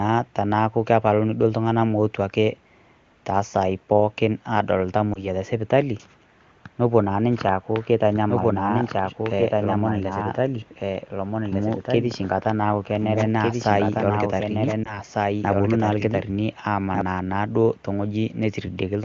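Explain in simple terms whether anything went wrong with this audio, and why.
Two kinds of fault are audible. Lost AMR speech frames: at 5.14–5.24 s and 14.84–14.99 s the speech briefly dips and warbles, which fits a single lost 20 ms frame that the decoder patched over. Doubled audio track: from 8.15 s to 17.01 s a quieter copy of the speech trails about one and a half seconds behind, likely from a second, slower capture path.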